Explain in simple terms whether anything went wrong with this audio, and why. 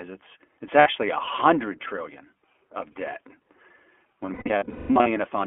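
iLBC codec, throughout the clip: the speech passed through a narrowband phone-call codec that codes each 20 ms chunk on its own. Everything above about 3.4 kHz and below about 300 Hz is gone, so the speech sounds thin, muffled and plainly rough, slightly synthetic.

Lost iLBC frames, at 0.80 to 0.88 s and again from 4.26 to 5.08 s: packets went missing, and the decoder filled each gap by repeating its last sliver of sound mixed with noise. The first loss, 60 ms between "is it's it's" and "a hundred trillion of", comes out as a brief buzzy smear. The later stretch loses about half a second of audio, scattered across 0.8 s, with gaps up to around a fifth of a second, so it sounds choppy with held, breathy fills. Because each chunk stands alone, the voice comes back right after each gap.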